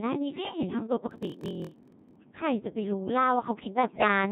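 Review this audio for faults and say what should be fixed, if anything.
Throughout, the speech sounds robotic and buzzy with heavy damage. This is the Codec 2 vocoder resynthesising the voice from pitch, voicing and envelope parameters, which fits its 1.6 kbit/s mode. To prevent it, carry the audio over a higher-bitrate waveform codec where the link allows.

From 1.09 to 2.16 s a steady 43.1 Hz buzz appears and the speech drags to 0.938 speed. This is a block size mismatch (padded), where short blocks are zero-filled, which fits a 1024-sample read block. To prevent it, match the writer's block size to the reader's.

From 3.87 to 4.08 s the synthetic voice jumps in pitch and level and breaks into warbles and gibberish. These are bit errors on digital voice radio, with around one bit in ten flipped across a few frames. To prevent them, improve link margin or add stronger forward error correction.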